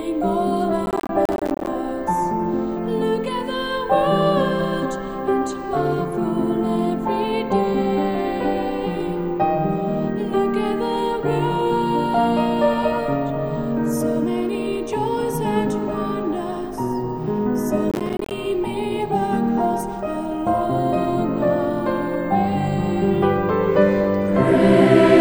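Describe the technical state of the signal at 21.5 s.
At 21.5 s the signal is intact, with no dropout, distortion, glitch or other technical fault to be heard at that point.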